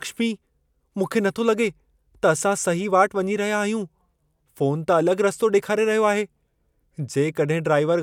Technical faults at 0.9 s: none

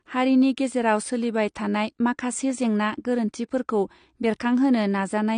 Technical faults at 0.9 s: AAC compression

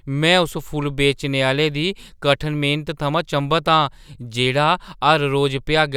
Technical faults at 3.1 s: none

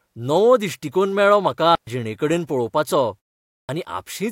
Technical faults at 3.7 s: clipped start after a pause

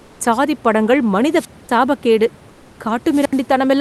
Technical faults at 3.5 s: wireless microphone squelch dropout

